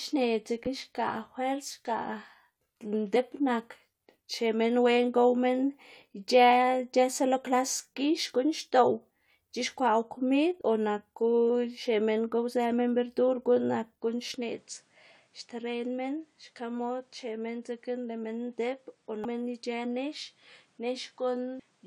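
Damaged data in the compressed stream makes the decoder misread a frame, lose sync and jump to the next header. The result is a brief glitch at 3.15 s and again at 10.6 s, just before "o naku".

From 14.34 s to the end, the input was likely switched to a poorer device. The band narrows, with nothing above 10.5 kHz. The speech turns duller and a few decibels quieter, and a faint new noise floor appears, all without any gap at the change.

The same stream corruption returns on the duller signal as short blips at 19.24 s and 21.58 s.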